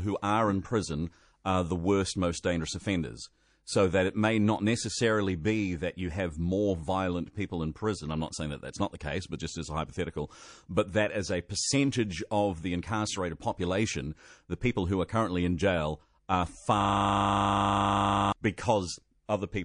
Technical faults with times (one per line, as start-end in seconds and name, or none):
0.00-19.64 MP3 compression
16.81-18.32 system hang loop
19.26-19.29 pre-echo